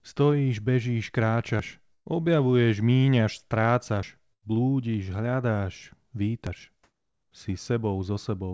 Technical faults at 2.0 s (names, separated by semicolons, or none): burst of packet loss